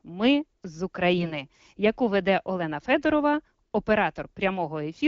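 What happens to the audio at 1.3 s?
From 1.18 to 1.32 s, AMR bit errors corrupt the less protected bits, around one in twenty, misplacing excitation pulses, so the speech turns hoarse, scratchy and gargly.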